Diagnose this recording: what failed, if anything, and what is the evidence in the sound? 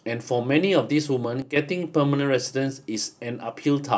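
A sudden gain jump hits the speech from 1.42 to 1.56 s. The level drops by about 9 dB in one step, and the background noise drops with it, then both recover. The likely cause is a digital gain change applied without a ramp in the processing stage.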